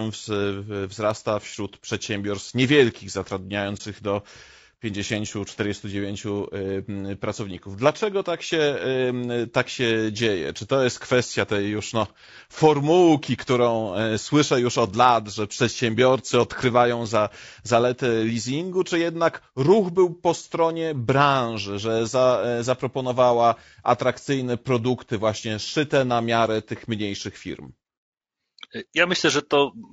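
From the start, the speech carries plainly audible low-delay AAC compression damage, most likely from AAC-ELD at a low rate, with a graininess that points to around 32 kbps. At this low bitrate the coder cannot spend enough bits on the spectrum, so the voice sounds rough. On a spectrogram the harmonic stripes look smeared, with noise filling the gaps between them, and the upper band looks blotchy and thinner than natural speech.

At 3.77 s the sound drops out and returns by 3.81 s. This is AAC frame loss with muting: a missing frame's spectrum was zeroed, and the overlapping windows either side fade the signal down and back up. The result is a brief soft-edged dip. The waveform shows a smooth taper into near silence and out again, and the spectrogram shows a narrow vertical blank column. The gap's length fits a single lost frame.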